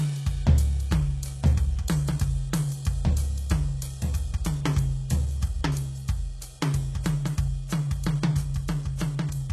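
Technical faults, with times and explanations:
Throughout, HE-AAC compression: the music has a bright but gritty, metallic top that stops dead at 12.3 kHz, likely from spectral band replication copying lower bands upward. Unlike plain low-pass muffling, the treble is present but synthetic, which fits roughly 16 kbps.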